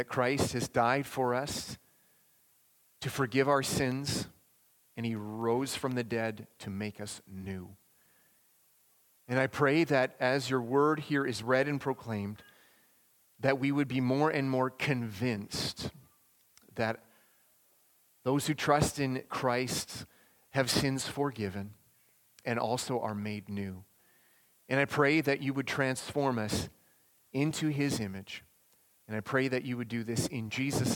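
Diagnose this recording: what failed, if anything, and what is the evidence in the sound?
The failure is at the driver or buffer stage: periodic USB or driver dropouts. From 3.92 s to 5.92 s there is a regular tick every 0.25 s, about ten in all. Each marks a tiny gap, a small fraction of a millisecond, filled with silence. A recurring background task is stalling the USB bus or audio driver on a fixed schedule, so each stall drops a sliver of samples and leaves a click in the sound.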